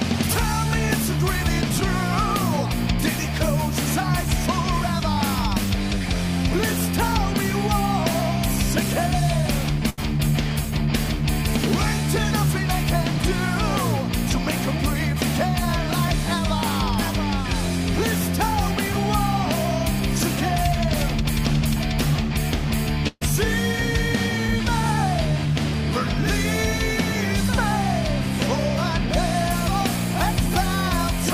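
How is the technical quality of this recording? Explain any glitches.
The recording has three network-related dropouts.

A burst of packet loss at 9.89–9.99 s and 23.07–23.23 s: the receiver extended and faded the last sound for 80 ms and 136 ms, and the second one ends in 20 ms of silence before the audio resumes.

Short concealed packet loss at 24.47–24.50 s: about 20 ms went missing, leaving a brief smear where the decoder patched the hole and blended back.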